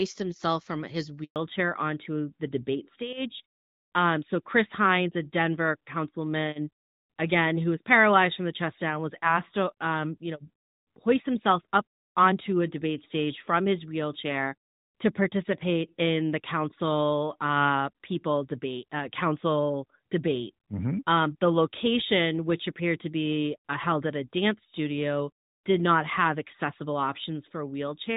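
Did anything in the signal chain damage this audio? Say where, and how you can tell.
Yes. A handover gap at 1.24 to 1.36 s, right after "himself from his", is network damage: the speech fades out within a few tens of milliseconds and the line stays silent for about 120 ms before sound returns. That pattern fits the call being passed from one network link to another, with no speech frames delivered during the switch, so the syllables in that window are simply missing rather than garbled.

A fallback to narrowband starts at 1.36 s, the moment the gap ends, and lasts to the end of the clip. This is a codec change forced by the network. Before the gap the speech carries the brighter HD Voice band, consistent with AMR-WB at about 12.65 kbit/s. Afterwards nothing above 4 kHz survives, and the speech sounds duller and rougher. That is the signature of AMR-NB at its top 12.2 kbit/s mode taking over once the new link was established.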